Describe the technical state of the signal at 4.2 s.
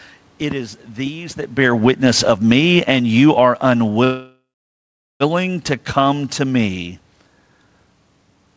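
At 4.2 s the signal sits inside a call audio freeze running from 4.04 to 5.23 s. Delayed packets likely drained the jitter buffer, so the receiver stretched the last sound into a fading buzz or hiss, then about 0.77 s of silence, before resuming where it left off with nothing lost.

The same moment falls within an automatic gain falling span from 1.46 to 6.96 s. The gain control judged the input too loud or its background noise too strong and lowered its gain gradually by about 10 dB, so the sound and its room background sink together in level across that stretch.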